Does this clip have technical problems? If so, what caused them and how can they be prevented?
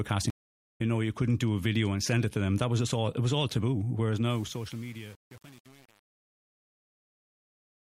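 Yes. From 0.30 to 0.81 s the speech drops out for about 0.45 s, then jumps ahead and resumes at "know you couldn't do". That is a stream reconnect. The connection broke, the player fell silent, and a fresh decoder rejoined the live stream roughly half a second later, so that stretch of speech is simply gone. Prevent it with a larger network buffer and automatic resume from the last received position.

From 4.25 s to the end at 7.84 s, the fade-out turns gritty as it gets quieter. This is truncation distortion on a fade. The fade was processed with too few bits and no dither, and the sound fits roughly 7-bit resolution. Near the bottom, the waveform collapses into a few coarse steps instead of tapering smoothly. Prevent it by fading at high bit depth and adding dither before reducing word length.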